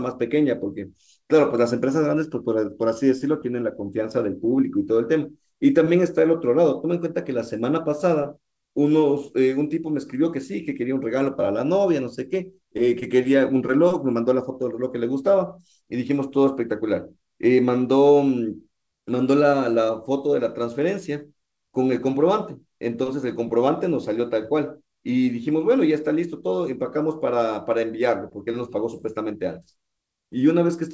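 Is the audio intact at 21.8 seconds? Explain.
Yes, the audio at 21.8 seconds is intact, with the speech passing through the G.722 call path without any dropout, glitch or distortion at that moment.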